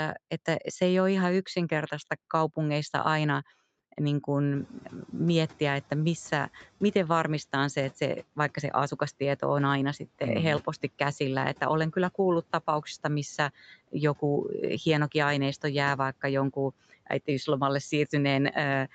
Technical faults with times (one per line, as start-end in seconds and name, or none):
4.54-6.60 noise suppressor catching up